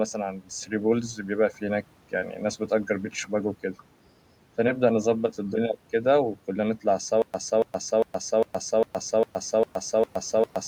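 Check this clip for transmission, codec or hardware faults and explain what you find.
One fault is audible. From 7.22 s to the end there is a stutter with silent gaps: a 0.28 s fragment repeats eight times, each followed by 0.12 s of digital silence, likely from a stalled stream replaying its last buffer. Background room noise sits about 23 dB below the speech.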